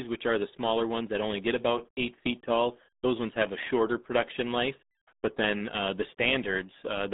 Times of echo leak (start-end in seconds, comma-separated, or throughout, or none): none